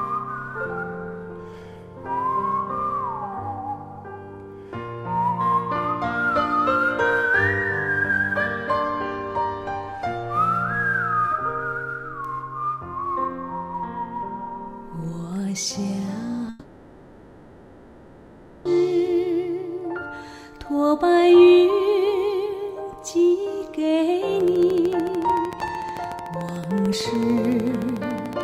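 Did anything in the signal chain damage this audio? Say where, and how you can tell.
Yes, in two places. From 16.49 to 18.67 s there's a long network dropout. About 2.16 s of audio just never arrives. The receiver papers over the whole gap with a continuation of the last sound, a buzzy or hissy fill that decays, and never drops to true silence. Then the audio picks up again further on, with that chunk simply gone. That pattern is likely packet loss on the network leg, with concealment covering the hole.

The second problem is a train of clicks from 24.40 s right to the end. They're very regular, about 13.5 a second, all with much the same shape, and they stick up something like ten dB above the programme, so you hear a steady ticking riding over everything. A fixed-rate pulse like that points to the analogue wiring or the interface, most likely interference from nearby gear or a faulty connection or power supply.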